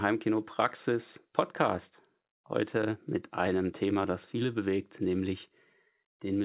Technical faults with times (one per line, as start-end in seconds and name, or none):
none